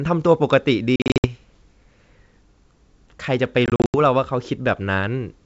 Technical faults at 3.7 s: packet loss on an ADPCM call

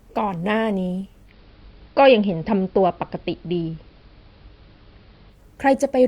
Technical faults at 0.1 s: none

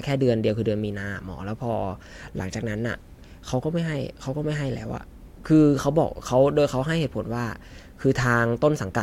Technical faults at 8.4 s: none

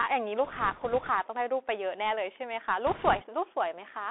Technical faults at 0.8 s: Bluetooth CVSD headset codec; bit errors on a Bluetooth voice link

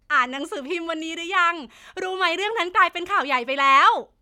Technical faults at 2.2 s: none

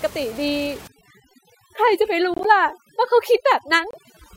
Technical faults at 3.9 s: overdone noise removal; corrupt frame decoded

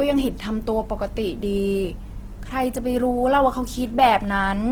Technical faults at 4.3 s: Opus compression

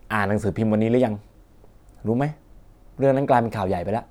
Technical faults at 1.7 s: none

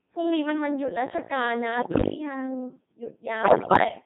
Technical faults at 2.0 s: Codec 2 vocoder; bit errors on digital voice radio

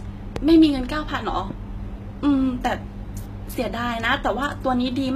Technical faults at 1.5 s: HE-AAC compression; loud pop

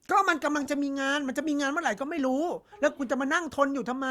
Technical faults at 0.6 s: short concealed packet loss

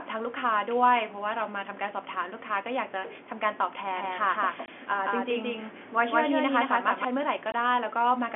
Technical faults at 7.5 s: packet loss filled with silence

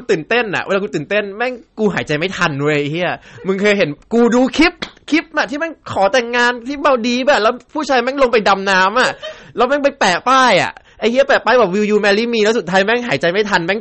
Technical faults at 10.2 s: hard clipping; MP3 compression

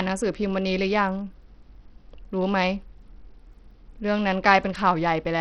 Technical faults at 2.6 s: Bluetooth SBC compression

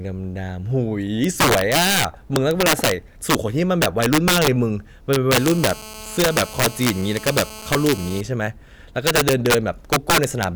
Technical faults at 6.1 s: integer overflow; GSM phone buzz

